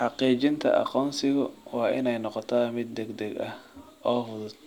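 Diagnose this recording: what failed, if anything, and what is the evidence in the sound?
Nothing failed: the speech shows no audible evidence of a fault, so there is no stage to implicate.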